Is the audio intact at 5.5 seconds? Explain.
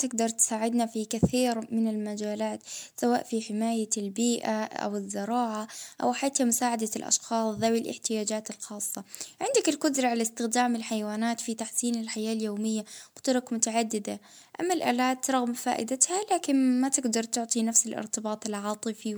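No, at 5.5 s the speech carries generation loss, as it does throughout. It sounds swirly and hollow with smeared attacks, likely from repeated lossy encoding, about four passes of something like 128 kbit/s MP3, each adding new quantisation noise and spectral holes, with nothing above 20.1 kHz.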